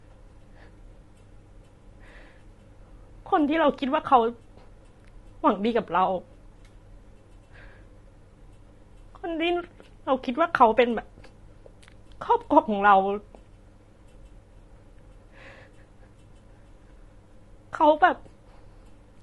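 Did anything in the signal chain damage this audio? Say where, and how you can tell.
Yes, at the codec stage: throughout, the speech is rough and grainy, likely from low-delay AAC compression at a bitrate fitting 32 kbps; a spectrogram shows noise filling between blurred harmonics.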